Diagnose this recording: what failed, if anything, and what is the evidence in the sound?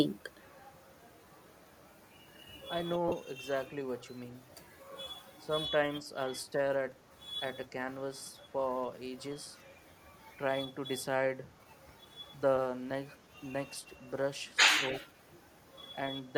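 Codec first, on the Bluetooth LE Audio link: at 3.08 to 3.12 s the speech smears into a brief noisy wash for 37.5 ms, which fits about five lost LE Audio frames. The LC3 decoder likely patched the gap by reusing the last spectrum with scrambled phase.

Speech suppressed in double talk: the talker dips briefly at 5.4 to 5.5 s and 13.89 to 13.93 s, only slightly, around 5 dB. The deeper dip is at 15.01 to 15.17 s, closer to 15 dB. The likely cause is the echo canceller pulling down both sides while the far end spoke over them.

Echo leak, in call processing: a faint delayed copy of the speech trails 280 ms behind at 13.18 to 13.29 s and again at 13.66 to 13.87 s. It sits very low, roughly 35 to 40 dB under the speech. Likely a loudspeaker echo the far end's canceller didn't fully remove.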